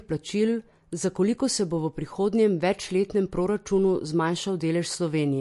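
Throughout, likely MP3 compression makes the speech watery and swirly. The spectrogram shows a hard ceiling at 11.3 kHz and flickering holes, which fits a bitrate near 48 kbps.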